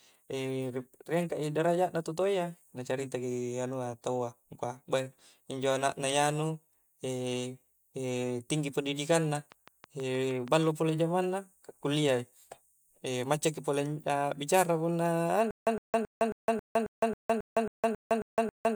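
From 9.37 to 10.64 s, a train of clicks ticks through the speech, about ten regular pops at 6.34 per second, peaking roughly 5 dB above the speech. They show as evenly spaced vertical lines on the spectrogram. Interference is the likely cause.

From 15.51 s to the end, a stutter with silent gaps sets in. A 111 ms fragment repeats 12 times, each followed by 160 ms of flat-line silence, giving identical blocks every 271 ms. This likely comes from a stalled stream.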